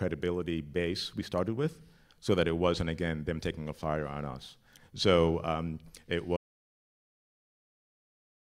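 At 6.37 s, right after "um it", the speech cuts off mid-flow and an audio dropout to silence follows, lasting about 2.2 s to the end of the clip. The gap is silent with no room tone. The likely cause is lost input, such as a disconnected device or a failed link, while recording carried on. On a waveform the trace collapses abruptly to a flat line; a spectrogram goes uniformly blank.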